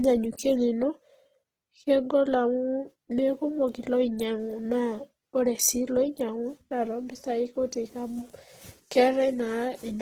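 Across the whole clip the speech carries plainly audible codec damage, a rough, grainy texture whose likely cause is Opus compression in its CELT mode at a rate that sounds close to 16 kbps. Short of bits, the encoder keeps each band's energy but fills in the detail with folded or noise-like content, so voiced sounds turn hissy and coarse. Unlike MP3 there is little swirling, and the bandwidth stays full, reaching about 20.2 kHz.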